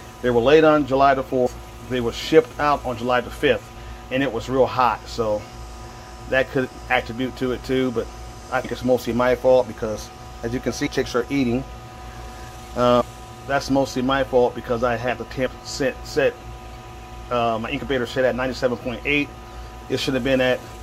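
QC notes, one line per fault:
1.45–1.47 s, 8.64 s, 10.86 s, 13.00 s, 15.45 s: compressed frames skipped. At each point whole codec frames go unplayed and the audio jumps forward. The skips are about 150 ms at the first three, about 400 ms at 13.00 s and about 70 ms at 15.45 s. Each jump spans between about 3 and 15 frames of 26.1 ms.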